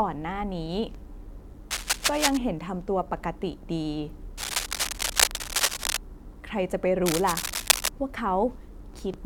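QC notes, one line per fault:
1.71 to 2.38 s, 4.37 to 5.97 s and 7.06 to 7.89 s: cable scratch noise. Dense, uneven bursts of scratchy rustle sit over the speech. The first burst is about as loud as the speech. The second and third are louder than it, by about 5 dB. The likely cause is a worn cable or connector being moved. Its contact resistance jumps around rapidly, and that flutter becomes crackle in the signal.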